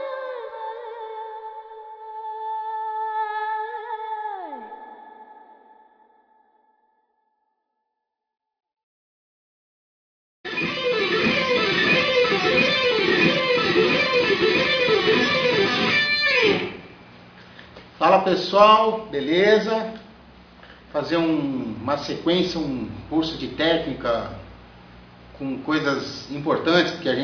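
No technical faults can be heard anywhere in the audio, and the signal keeps steady level, continuity and timing throughout.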